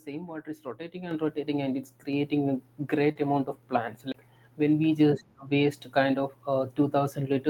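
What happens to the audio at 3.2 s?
Right around 3.1 s there's a short concealed packet loss, running from about 3.11 to 3.17 s. Roughly 40 ms of the call didn't reach the decoder in time, and the receiver papered over most of it, about 38 ms, by carrying the previous sound forward and then easing back into the real signal. What you hear is a quick smear or wobble rather than a clean gap.

Overlapping the tail of that, from about 3.15 to 3.17 s, one packet is a lost packet rebuilt from error correction. The next packet carried a low-bitrate backup copy of it, so the decoder played those 20 ms from the copy instead of leaving a hole. That last slice comes out rougher and noisier than what's around it, so the recovery into clean audio isn't quite seamless until just after 3.17 s.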